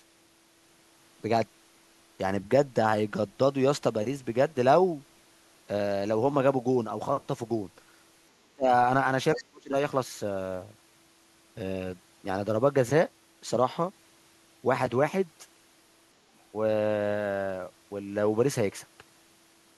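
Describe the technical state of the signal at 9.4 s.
A faint second voice slips in from 9.35 to 9.43 s, sitting around 15 dB below the speech. This is the other side's voice leaking through, likely loudspeaker echo the canceller left uncancelled. Overlapping it, the talker's speech from 9.36 to 9.74 s is ducked deeply, by roughly 35 dB at worst, for about 0.4 s. This is speech suppressed in double talk, likely the echo canceller turning down both voices when they coincided.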